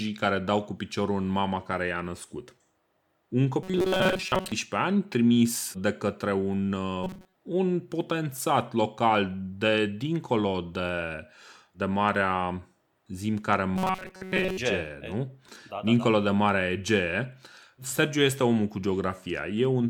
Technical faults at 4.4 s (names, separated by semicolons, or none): robotic sound from repeated short buffers